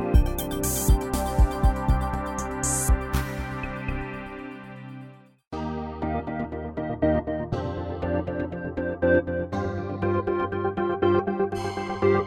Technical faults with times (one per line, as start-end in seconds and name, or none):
none